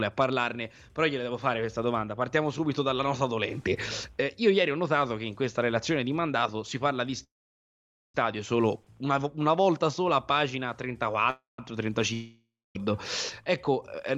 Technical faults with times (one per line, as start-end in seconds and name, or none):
7.23-8.15 call audio freeze
11.30-11.59 call audio freeze
12.13-12.76 long network dropout